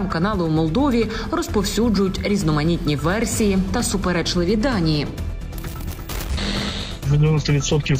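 Nothing technically wrong turns up in this one; the audio just sits there and behaves itself the whole way along, with no problems to point at.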